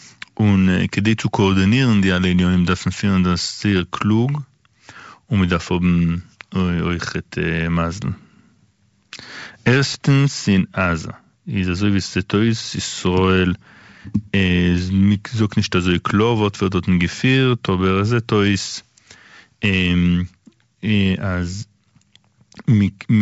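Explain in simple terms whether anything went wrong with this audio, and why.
Nothing went wrong here: the speech just passes through G.722 wideband telephone coding, which keeps it sounding fuller and brighter than an ordinary phone line, and nothing in the clip points to a problem.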